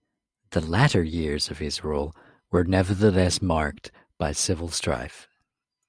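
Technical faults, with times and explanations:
Listening closely to the speech recording, nothing technical stood out at any point.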